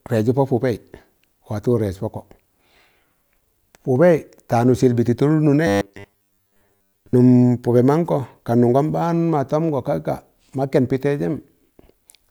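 From 5.67 to 7.14 s, audio likely arrived too seldom, so a short buffer was replayed over most of the speech: robotic sound from repeated short buffers, a rigid 100 Hz buzz.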